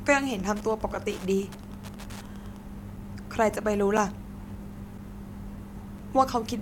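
A speech recording with two faults. Wi-Fi interference adds steady ticking from 0 to 2.64 s, about 20 dB below the speech. The ticks repeat every 102.4 ms, matching a nearby radio's beacon. A gap between chunks leaves a 6.5 ms hole at 0.95, 1.96, 2.97, 3.97, 4.98 and 5.98 s. The one-second spacing suggests joins between one-second chunks.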